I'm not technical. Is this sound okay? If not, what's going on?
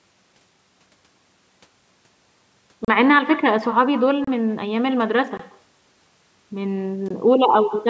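No. Everything said is shadowed by a quieter, thinner copy arriving roughly 0.15 seconds later. That's echo with no canceller: the other end's speaker feeds back into its microphone.

There are also four brief blocks of digital silence, tiny holes where the sound drops out, at 2.85–2.88, 4.24–4.27, 5.37–5.39 and 7.08–7.10 seconds.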